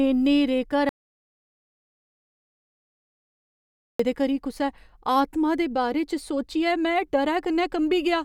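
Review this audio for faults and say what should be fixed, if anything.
At 0.89 s the speech cuts off abruptly and the track falls to silence until 3.99 s, when it resumes mid-flow with "करी कुसै आतमा दे". This is an audio dropout to silence, about 3.1 s of sound lost, likely from the input device or link being interrupted while the recorder kept writing silence. Unlike a natural pause or an aggressive noise gate, no room tone or breath remains in the gap, and the edges are hard rather than faded. Secure cables and connections, and monitor input levels during recording so any loss is caught and retaken.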